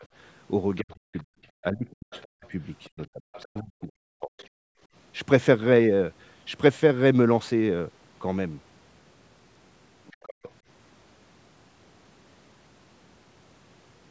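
At the very start, 0.0 to 0.05 s, the speech dips by roughly 15 dB for a split second. Between 0.8 and 4.4 s it sinks again and again, in pieces adding up to about a second and a half, at worst by around 40 dB, so syllables thin out or vanish. This is speech suppressed in double talk. Both ends were likely talking at once, and the echo canceller, unable to tell the local talker from the loudspeaker echo, pulled everything down.

Overlapping this, a second, faint voice surfaces from 0.78 to 1.21 s, roughly 30 dB below the speech, and again from 1.9 to 3.45 s at about 25 dB below. A brief scrap follows at 4.41 to 4.47 s, around 35 dB down. This is the other side's voice leaking through. The far end was likely playing on the talker's loudspeaker, and the echo canceller left some of it in the microphone signal.

From 4.68 to 4.88 s the room sound drops away by about 32 dB for roughly 150 ms and then returns. 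This is background gated by the echo canceller: with the loudspeaker active, the canceller clamped the microphone hard, then released it.

Later, leaked far-end voice returns from 10.07 to 10.5 s, only about 20 dB under the speech. Inside that span, from 10.37 to 10.46 s, the speech is again suppressed in double talk, by around 40 dB for about a tenth of a second.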